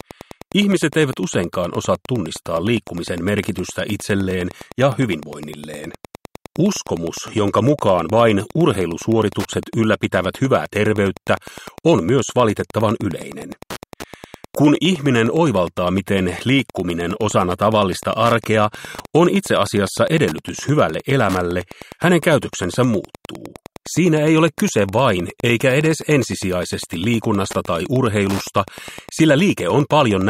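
Wi-Fi interference runs throughout: a nearby radio's beacon, every 102.4 ms, is rectified by the audio circuit into a steady tick about ten times a second, some 20 dB below the signal. A spectrogram shows evenly spaced thin vertical lines; the waveform, regular spikes.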